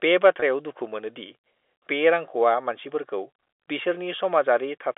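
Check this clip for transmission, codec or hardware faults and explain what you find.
One transmission fault is audible, in speech carried over a telephone line. From 0.40 to 0.42 s there is packet loss with pitch repetition. About 20 ms of audio went missing, which fits a single lost packet. The receiver filled the gap by repeating the last pitch period. The sound briefly holds with a slight buzz before the speech resumes. The G.711 telephone coding underneath is band-limited to roughly 300 Hz to 3.6 kHz.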